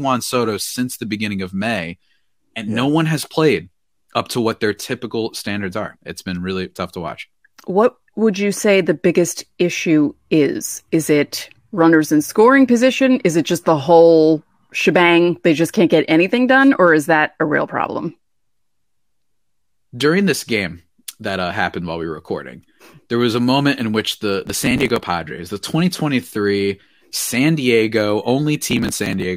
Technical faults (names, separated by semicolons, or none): processor overload crackle